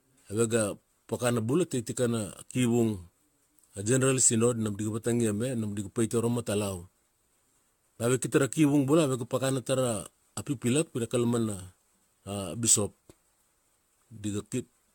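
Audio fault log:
Throughout, generation loss: the speech has a swirly, hollow, smeared quality that's worse than a single lossy pass would leave, with consonant attacks going soft and blurry. It sounds like it's likely been through an AAC-style codec somewhere around seven times over, each re-encode quantising on a shifted frame grid so the noise piles up. There's also nothing at all above 17 kHz, which fits a mid-rate encode around 96 kbit/s.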